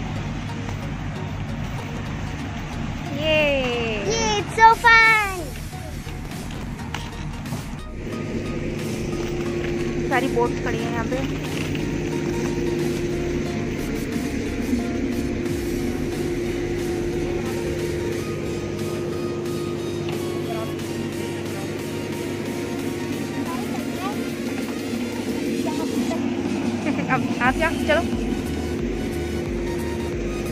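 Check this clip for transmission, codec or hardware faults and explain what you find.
Two bursts of processor overload crackle, at 1.66 to 1.97 s and 6.25 to 6.75 s, sound like gritty tearing: short runs of skipped, roughly 10 ms buffers that the overloaded processor missed again and again.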